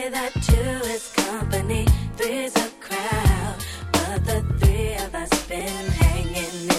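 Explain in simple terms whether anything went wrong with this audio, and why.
Two things went wrong. From 3.73 to 3.80 s there is DAB burbling: weak digital radio reception let a few bit errors slip past error correction, which fits several damaged audio frames. Individual frequency bands get short blips of noise over the audio.

At 5.60 s there is a repeated buffer: fresh audio arrived late, so the player replayed its last tiny chunk, which fits a buffer of about 5 ms, two extra times. The result is a quick click or buzz, with about 10 ms of audio lost.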